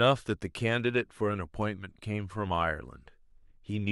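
No technical faults can be heard anywhere in the speech.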